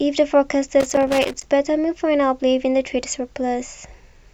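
From 0.80 to 1.43 s the speech breaks into loose connector crackle: a worn contact keeps making and breaking, chopping the signal into an irregular scratchy burst. The waveform shows ragged gaps and spikes, and the spectrogram shows scattered broadband vertical streaks.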